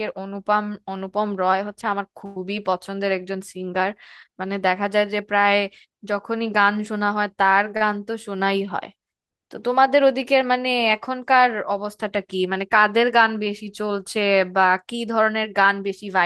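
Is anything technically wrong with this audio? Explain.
Yes, the speech has three timing faults from its trip through a call codec path.

From 2.25 to 2.37 s there is a call audio freeze. The last sound is held and fades for 106 ms and then resumes from where it stopped, so nothing is lost. The likely cause is delayed packets draining the jitter buffer.

From 7.77 to 7.82 s there is a short stall from a late packet. The receiver stretches the preceding sound by 37 ms until the packet arrives, which gives a held sound with nothing missing.

From 15.67 to 16.21 s there is a jitter buffer speed-up. The receiver trims pitch-period slices, about 50 ms in total, to reduce excess buffering. The speech runs 7% faster at unchanged pitch and sounds hurried.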